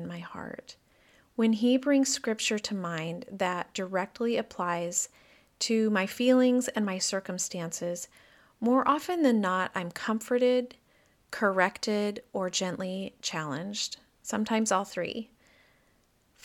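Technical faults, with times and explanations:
Nothing stood out as a technical problem on listening to this speech recording.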